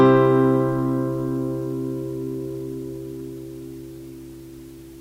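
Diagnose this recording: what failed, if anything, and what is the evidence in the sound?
Nothing here points to a failure at any stage; the sounds come across steady and intact, with nothing in the recording that needs tracing back to the chain.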